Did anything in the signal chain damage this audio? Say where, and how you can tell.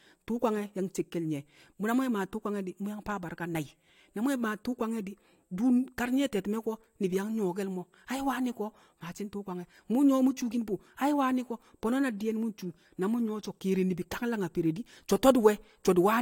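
No, nothing in the chain seems to have damaged this speech recording; there's nothing to point to at any stage.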